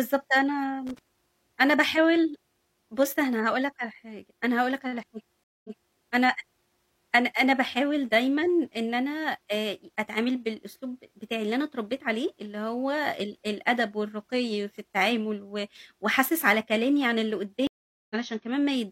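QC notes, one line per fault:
0.87–0.99 s, loose connector crackle: a worn or dirty contact in the signal path briefly made and broke as it shifted, chopping the speech on and off, so a short, irregular burst of scratchy crackle sits over the audio.
5.44–5.97 s, stream reconnect: the connection dropped and the player restarted with a fresh decoder. This leaves 205 ms of silence, then playback resumes 325 ms earlier than where it cut, so a short stretch of speech repeats and the restart fades in.
17.67–18.16 s, stream reconnect: the stream dropped again, giving 432 ms of silence before a new decoder picked up. This time the audio resumes roughly 150 ms further on, so a sliver of speech is skipped and the return fades in.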